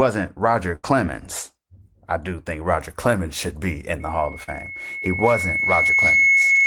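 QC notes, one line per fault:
0.75–0.85 s, burst of packet loss: about 80 ms of speech just drops out here. The receiver keeps extending the last sound and fades it down, so you get a held buzz or fading hiss, then it jumps ahead with that stretch missing.
4.00–6.67 s, loudspeaker feedback squeal: a 2.2 kHz tone creeps in and swells over roughly two seconds until it sits about 10 dB above the speech, right to the end. The mic is hearing its own loudspeaker, and that frequency keeps feeding itself.
4.43–4.49 s, short concealed packet loss: about 40 ms never arrived in time, so the decoder patched it by continuing the previous sound and blending back in. You hear a quick smear or wobble under the building squeal, and a short consonant could get swallowed.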